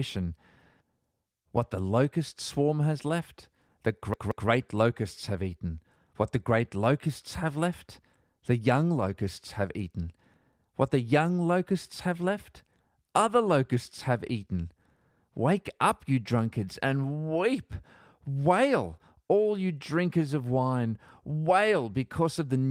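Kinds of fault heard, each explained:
CD stuck on one turn: a scratch knocks the laser back one track at the same point in every rotation, so the same fragment of about 0.18 s plays again. From 4.14 to 4.49 s the speech repeats twice, with a brief mute at each jump, giving a quick, even stutter. A dropout would leave only silence, and an echo would fade. Here the repeats are exact copies at the same level, each cut off abruptly.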